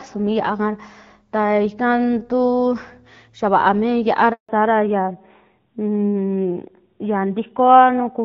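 At 4.33 s, just after "vaa mi", the call was passed between networks and no speech frames arrived, a handover gap: the sound cuts out for 160 ms. From 4.49 s to the end, the call fell back to narrowband, from HD Voice to an older codec: everything above 4 kHz is gone, and the speech turns duller and rougher.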